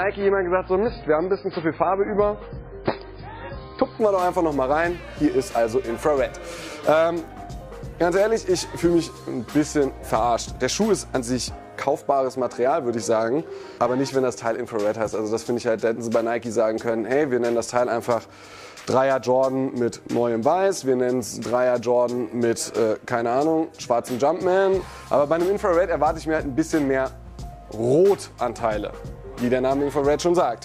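For the first 4.0 s, the audio plays as an adaptive stream starting at a low bitrate. Nothing is heard above about 5 kHz. Codec artefacts are strong and the sound is dull and smeared. This fits a very low-bitrate MP3, around 16 kbit/s. The player began on this cheap version to start quickly. Once it had measured the connection, it switched up. At 4.0 s the quality jumps suddenly, with no gap. The fuller treble points to roughly 128 kbit/s.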